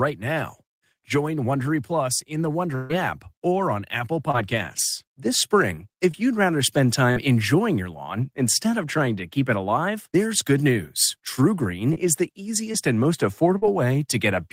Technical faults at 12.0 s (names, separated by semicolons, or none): short concealed packet loss